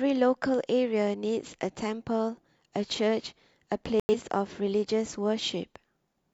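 At 4.00 s the speech drops abruptly into silence for about 0.16 s, then resumes with timing intact. This is a corrupt frame muted: damaged compressed frames, a span that fits roughly three frames, were rejected by the decoder and replaced with silence.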